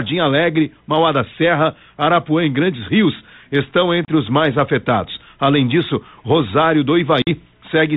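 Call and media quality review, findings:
Hard-edged dropout at 4.05–4.09 s, about 30 ms of speech missing, slightly distorted speech on return settling within tens of ms. Packet loss on an ADPCM call: a few packets lost, decoder predictor and step size desynchronised.

Longer hole at 7.22–7.29 s, about 50 ms missing, same distorted re-entry. Packet loss on an ADPCM call, several consecutive packets; G.726 ADPCM stream underneath is band-limited below 4 kHz, light coding damage fitting 32 kbit/s.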